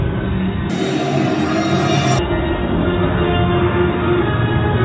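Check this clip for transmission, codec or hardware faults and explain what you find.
One fault stands out, a wrong sample rate. From 0.70 to 2.19 s the audio runs at double speed and an octave (12 semitones) higher, thin and hurried. It fits 8 kHz material played at 16 kHz without conversion, so tempo and pitch rise together by 2.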